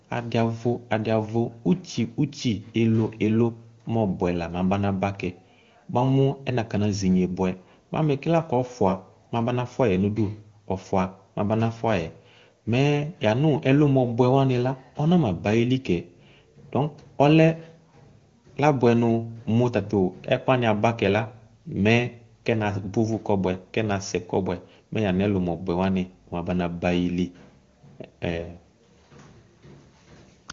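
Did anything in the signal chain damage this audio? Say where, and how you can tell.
No, nothing in the chain has damaged this speech; it comes through an AMR wideband (HD Voice) codec at 23.85 kbit/s, the format's highest rate, where any coding damage is faint at most.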